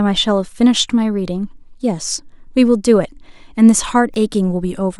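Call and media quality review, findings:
Block of digital silence at 4.14 s in the speech: a single tick, not an audible hole. The signal drops to silence for about 0.67 ms, consistent with a 32-sample block left unfilled by the playback or processing path. Unlike a transient spike, there is flat silence between two hard edges.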